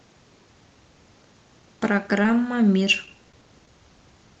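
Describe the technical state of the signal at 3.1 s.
At 3.1 s you're in the middle of a run of scattered short gaps spanning 2.07 to 3.68 s. About seven tiny packet dropouts, none longer than roughly 15 ms, got patched by stretching the preceding sound, so the speech stays clear but picks up little ticks and smeary hiccups.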